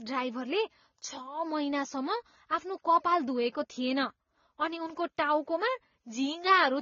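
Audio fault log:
throughout, transcoding between lossy codecs: the speech was likely encoded twice at low bitrates, in a way that fits AAC-LC followed by Vorbis. Nothing survives above 7 kHz. The second coder spends bits re-encoding the first's artefacts while adding its own, so both kinds of smearing are heard together.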